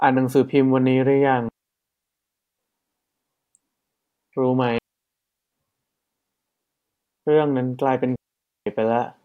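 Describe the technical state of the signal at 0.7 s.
At 0.7 s the speech signal is intact, with no audible technical fault at that moment.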